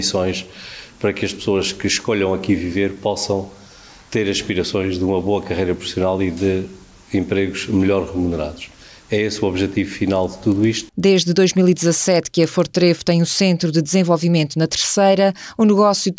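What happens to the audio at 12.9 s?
A steady 25 Hz tick rides on the sound from 9.72 to 13.44 s: a resampler restarted on every block, converting 48 kHz to 16 kHz in 40 ms chunks, leaves an error at each block edge.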